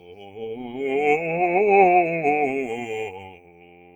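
A short music clip with a speech-style noise suppressor left running the whole way through. It treats the sustained parts and the ambience as noise, so attacks poke through while held tones and tails get pulled down, and the level pumps and thins with a swing of roughly 20 dB. You can also hear the sound cut by the noise suppressor in two spots. The opening, from 0.00 to 0.41 s, is turned down over about 400 ms. Then from 3.1 s to the end, the sound is pulled down again. Both dip by about 12 dB at worst.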